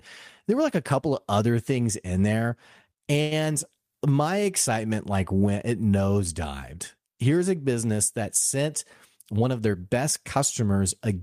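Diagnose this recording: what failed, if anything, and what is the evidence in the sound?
At 3.21 to 3.33 s one sound is held about 0.1 s too long, with a faint buzz or dip before the speech resumes exactly where it stopped. This is a short stall from a late packet, a network and jitter-buffer fault. The packet missed its playout time and the buffer ran dry, so the receiver stretched the last sound for 99 ms until the packet arrived. Nothing is lost, but playback now runs about 99 ms later.

From 9.16 to 10.04 s the speech sounds hurried, running at about 111% speed while the pitch stays where it was. This is a jitter buffer speed-up in the same network and buffer stage. Extra audio had built up in the buffer, so the receiver cut short pitch-period-sized pieces many times in a row to reduce the delay. Roughly a tenth of a second is trimmed away over that stretch.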